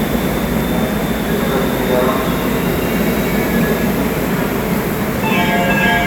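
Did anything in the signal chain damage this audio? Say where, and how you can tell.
No, nothing in the signal chain has left an audible mark on these everyday sounds. No stage between capture and playback gives any sign of having altered the signal.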